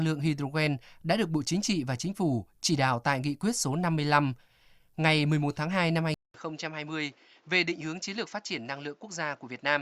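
At 6.14 s the speech cuts out for 200 ms, then resumes about 5 dB quieter, with nothing above 7.6 kHz and a new noise floor around 35 dB below the speech, lasting to the end. The likely cause is an input switched to a poorer device.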